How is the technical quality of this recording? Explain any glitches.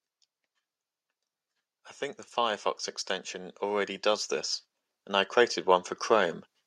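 The recording has two gradual swells in level. From 3.31 to 4.38 s, and again from 5.06 to 6.38 s, the speech and the background noise grow louder together, by about 4 dB and then about 3 dB. This is automatic gain rising: the gain control judged the input too quiet and slowly raised its gain, lifting everything at once.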